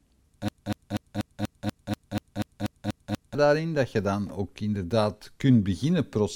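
From 0.48 s to 3.35 s the speech locks into a stutter: the same 0.24 s fragment repeats exactly, back to back, twelve times. This broken-record loop is likely a stalled player or stream resending its last buffered piece, so the audio meant for that stretch is lost.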